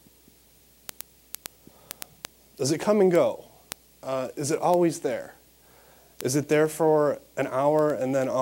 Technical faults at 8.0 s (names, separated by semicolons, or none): word clock ticks